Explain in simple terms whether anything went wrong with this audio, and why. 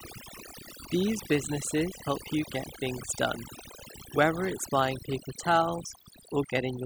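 A switching supply whistle runs through the whole recording: a thin high tone around 4 kHz, wandering between roughly 4.0 and 4.6 kHz, from a power supply running in an audible burst mode or beating with another one. Overdone noise removal is also present throughout: the background drops and breaks up into twinkling specks, and quiet parts of the voice were removed along with it.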